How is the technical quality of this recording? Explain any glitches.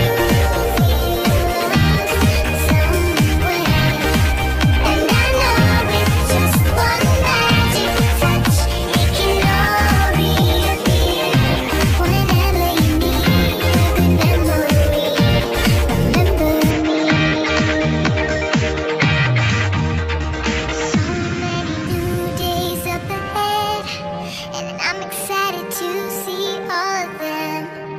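The recording has one clear glitch: from 16.7 s to 21.87 s the sound suddenly turns duller and boxier, with nothing above about 7.6 kHz, then opens back up at the end of that stretch. The change is abrupt, with no gap at either edge, and the loudness stays about the same, while a faint new background noise sits well below the signal. This is likely an input switched to a poorer device, whose narrower band and different noise floor replace the original microphone for those five seconds.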